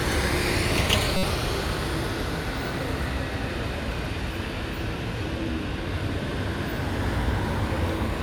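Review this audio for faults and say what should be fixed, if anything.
A corrupt frame was decoded from 1.17 to 1.24 s: bits inside the compressed stream were flipped, and the decoder played the damaged data instead of rejecting it. Misread gains and codes across roughly a couple of frames put energy at frequencies the original sounds never held, so the clip is broken by a short, fairly loud glitch lasting about 70 ms. Adding checksums or error detection on the transport, with frame concealment or repeat when a check fails, would stop damaged frames from reaching the output.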